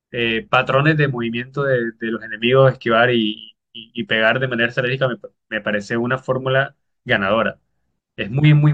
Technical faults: none

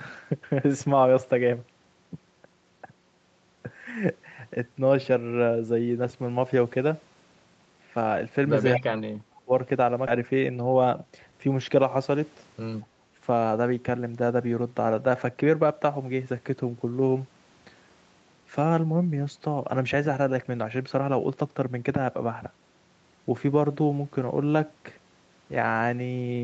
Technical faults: speech suppressed in double talk; echo leak; skip ahead; jitter buffer speed-up

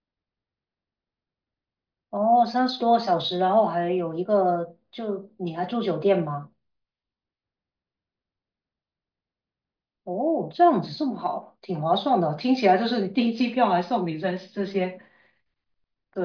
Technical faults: none

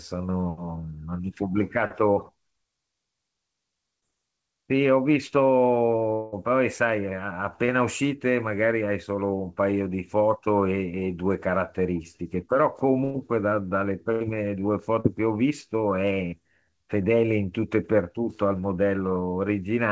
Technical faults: short concealed packet loss; long network dropout; burst of packet loss

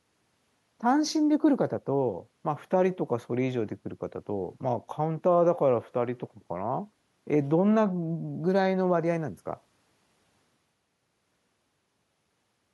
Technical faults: none

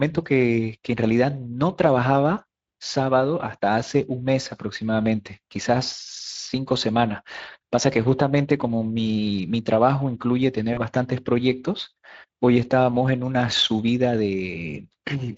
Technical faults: Speex codec; VoIP packet loss concealed by the speech codec

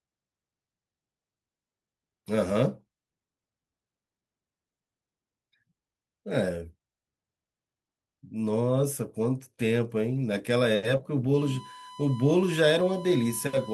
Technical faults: lost packet rebuilt from error correction; short concealed packet loss; USB whine

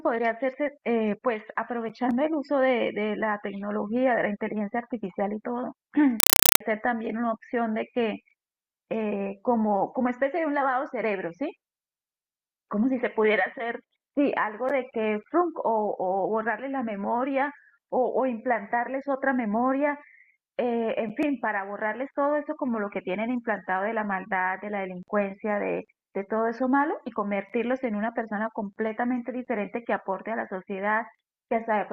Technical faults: compressed stream played as audio

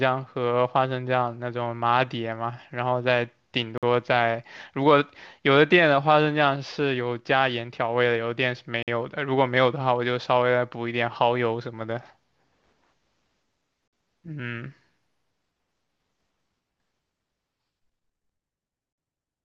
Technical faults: gap between chunks

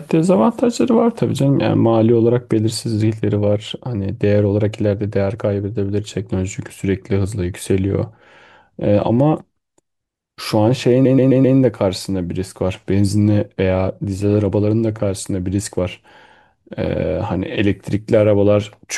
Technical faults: repeated frames

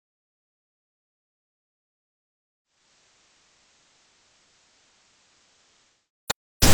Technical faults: digital radio blending to analogue

